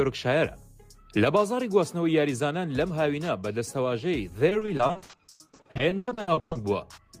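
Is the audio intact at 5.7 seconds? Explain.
No. From 4.49 to 6.57 s, repeated packet loss leaves gaps up to 120 ms, filled by extending prior sound, so it turns choppy and robotic.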